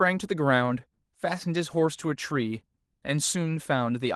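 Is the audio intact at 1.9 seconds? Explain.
Yes, the speech at 1.9 seconds is intact, with no dropout, click or other fault at that point, only the light coloration of Opus voice compression running normally.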